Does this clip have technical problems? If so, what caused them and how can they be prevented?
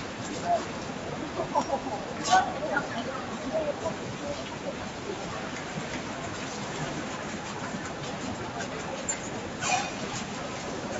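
Yes. Throughout, sustained sounds and tails pump and thin out by roughly 5 dB while attacks pass: a speech noise suppressor left on mistakes steady sound for noise. Switching noise suppression off, or using a music mode, for non-speech audio prevents it.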